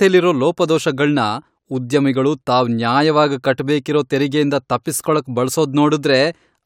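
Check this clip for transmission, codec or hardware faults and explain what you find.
Nothing in this speech recording stood out as a problem on listening.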